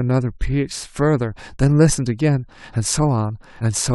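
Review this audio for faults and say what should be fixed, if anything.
At 3.59 s the speech breaks briefly, which is damaged data in a compressed stream: corrupted bytes made the decoder misread a frame, lose sync and skip to the next valid header. Fix by checksumming the file on transfer and restoring it from an intact source.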